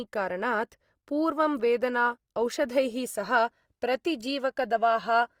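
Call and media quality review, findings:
Opus compression, whole clip. Speech plainly grainy, rough and noisy, little swirl. Likely Opus music (CELT) mode short of bits, filling bands by folding and noise. Fits a 24 kbps rate. Full bandwidth kept, content reaching about 20.2 kHz.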